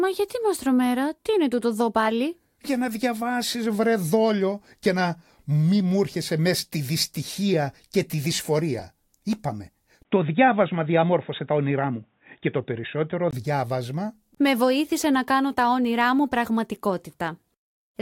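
Speech, with a band-limited stretch from 10.03 s to 13.33 s, most likely an input switched to a poorer device. A gap of about 20 ms marks the changeover, after which the band narrows, so the sound turns dull and boxy, with a faint new background noise roughly 50 dB below the signal. Level stays about the same. At 13.33 s the full bandwidth returns as the original input comes back.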